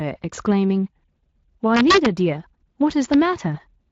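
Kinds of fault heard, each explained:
Integer overflow: peaks that should have been limited ran past the largest integer value and wrapped to the opposite sign, so each crest flips across the full range and lands as a hard crack rather than a flattened top. Here it hits the speech from 1.75 to 2.06 s, driven about 2 dB over the limit, and again at 3.13 s, barely over.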